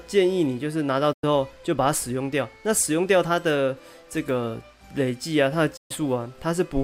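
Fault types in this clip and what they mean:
Digital broadcast dropout: the receiver lost usable frames and muted. The sound fades out over about 8 ms, falls silent from 1.13 to 1.24 s and again from 5.77 to 5.91 s, then resumes with that stretch simply missing. The gaps, 96 and 128 ms long, fit three and four lost 32 ms frames. A waveform shows each as a flat line after a brief taper. A spectrogram shows a clean vertical blank band across all frequencies.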